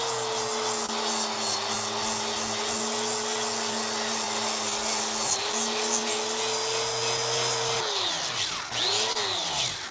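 Clock drift between sender and receiver runs through the whole clip: the sender's clock is slow by roughly three percent, so the receiver's jitter buffer keeps draining and the timing wobbles unevenly.

From 0.86 to 0.91 s, a short stall from a late packet: the buffer ran empty and the receiver held the last sound for 28 ms, giving a brief smeared hold with nothing lost.

Between 1.75 and 8.67 s come repeated timing corrections. The receiver keeps repeating small slices to cover the slow sender, playing back at 97% speed and adding about a fifth of a second in total. This is heard as a slightly dragging, uneven tempo with faint hiccups.

From 9.12 to 9.17 s, another short stall from a late packet stretches the sound for 26 ms before playback resumes where it left off.

Throughout, the call path's codec leaves nothing above 8 kHz, which fits a wideband call codec such as G.722.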